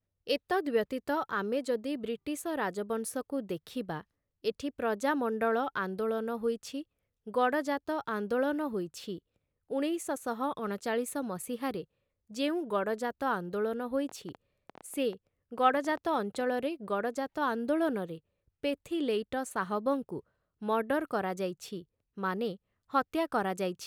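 A train of clicks runs from 14.09 to 16.51 s in this speech recording, about 10.4 clicks per second at an uneven pace, around thirty in all. Each click has much the same sharp shape and peaks at roughly the level of the speech, so the ticking is plainly audible over the talking and in the gaps. Repeated pulses like this are likely from electrical interference or a faulty connection or power supply.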